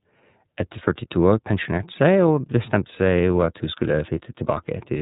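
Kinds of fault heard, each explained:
iLBC codec: The speech sounds boxed-in and thin, with nothing above 3.8 kHz, and a plainly audible rough, slightly synthetic grain runs through the whole clip. It comes from iLBC, a narrowband voice codec that codes each frame's excitation on its own rather than building on the frame before. The coarse texture fits the codec's 30 ms frame mode at around 13.33 kbps, which keeps less detail in each frame.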